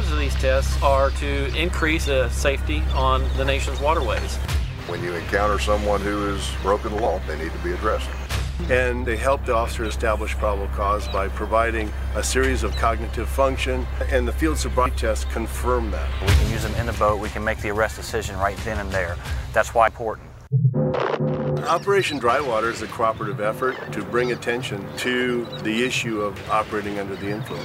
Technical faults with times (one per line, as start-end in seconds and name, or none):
2.04 dropped buffer (overrun)
7.06 dropped buffer (overrun)
11.98 dropped buffer (overrun)
14.86 dropped buffer (overrun)
19.88 dropped buffer (overrun)